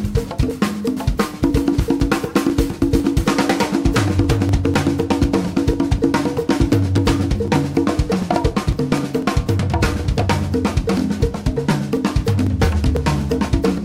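From 0.26 s to 13.71 s the audio carries periodic USB or driver dropouts, repeating every 0.249 s, about four per second and around fifty in all. Each time, something blocks the audio path briefly and roughly a millisecond of signal is skipped outright rather than filled with silence, so the waveform jumps abruptly. The result is a steady train of ticks locked to that interval, audible only where sound is present.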